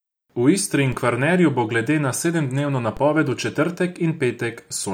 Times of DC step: 0.92, 2.97

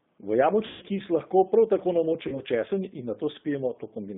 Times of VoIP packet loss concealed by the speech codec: 0.67-0.85, 2.28-2.40

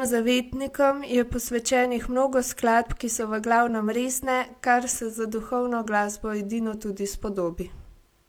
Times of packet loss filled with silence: none

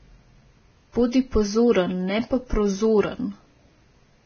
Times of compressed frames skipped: none

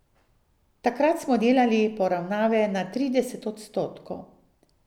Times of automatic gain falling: none

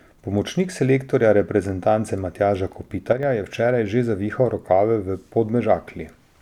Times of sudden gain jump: 3.12-3.23

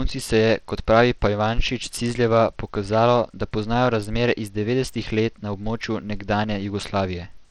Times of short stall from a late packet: none

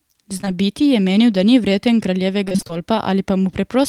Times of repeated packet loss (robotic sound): 2.44-2.71

